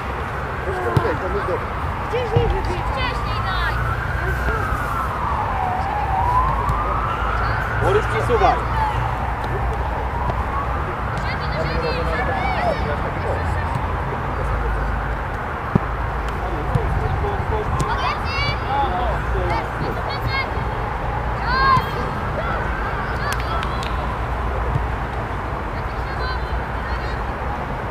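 Sharp single pops jump out at 4.49–4.51 s and 10.30–10.32 s, each about 15 dB above the sound, then a harder one near 20 dB at 15.76–15.78 s, with the sound continuing underneath. These loud pops are likely brief voltage spikes added to the signal.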